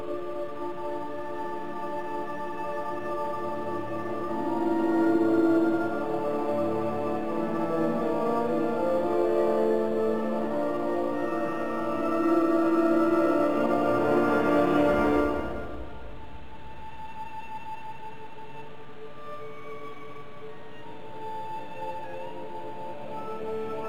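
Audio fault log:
Throughout, crude rate conversion. The audio carries a faint, gritty fizz that rides on loud and bright passages. Samples were repeated, with no smoothing filter, to change the rate. The pattern fits a step from 44.1 kHz up to 48 kHz. The rounding error cycles at a rate set by those two clocks, so it forms shifted, inharmonic copies of the sound itself. That inharmonic grit sits roughly 35 dB below the signal and tracks its level.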